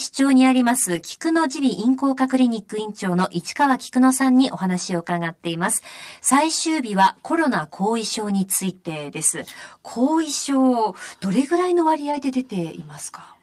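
Throughout the speech, a channel delay of roughly 10 ms causes comb filtering. One channel arrives late and is summed with the other, so shared content cancels at evenly spaced frequencies from around 40 Hz upward, giving a steady hollow, phasey colour.

At 0.95 to 1.05 s, 10.19 s and 12.11 to 12.17 s, a lost packet is rebuilt from error correction. The decoder fills each gap with a low-bitrate copy, so nothing drops out. The rebuilt stretches of about 60, 20 and 40 ms, which points to three, one and two lost packets, sound briefly rougher and noisier.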